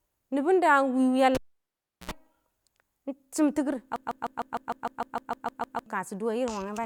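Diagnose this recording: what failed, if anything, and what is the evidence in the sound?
Analogue wiring failed first: a cable pulled and plugged in between 1.35 and 2.11 s. A pop opens the event, the speech then drops to near silence for about 0.71 s, and a roughly 74 ms burst of 60 Hz mains buzz follows as the plug's tip makes contact before the sleeve, ending in a second pop as the signal returns. On a waveform this shows as two sharp spikes around a flat stretch. A spectrogram shows vertical broadband lines at each pop and a short stack of 60 Hz harmonics just before the second.

From 3.96 to 5.86 s there is a broken-record loop. A 152.5 ms fragment of speech repeats exactly, back to back, twelve times, and the speech that should have filled those 1.9 s is gone. The cause is likely a stall at the buffer or playback stage, with the last held fragment being sent again until fresh data arrived. 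The waveform shows an identical short shape tiled end to end, and the spectrogram shows the same narrow pattern stamped repeatedly at a steady 152.5 ms spacing.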